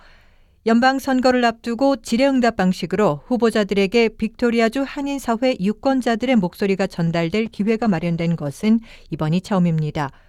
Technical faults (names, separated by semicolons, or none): call bitrate drop